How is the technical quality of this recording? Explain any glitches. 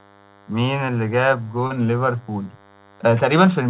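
The recording has two audible faults: a constant buzz beneath the speech and one brief glitch. The sound also stops at 4 kHz, which fits the G.711 telephone coding of the call path.

DECT cordless phone buzz runs through the whole clip, roughly 30 dB below the speech. A nearby DECT handset or base transmits a burst every 10 ms, and the audio circuitry rectifies it. That produces a thin, steady 100 Hz buzz with many harmonics. A spectrogram shows evenly spaced horizontal lines at multiples of 100 Hz, present even between phrases.

Short concealed packet loss occurs from 1.67 to 1.73 s. Audio failed to reach the decoder in time, and the receiver filled about 30 ms by extending the preceding sound before blending back into the real signal. It is heard as a brief smear or wobble.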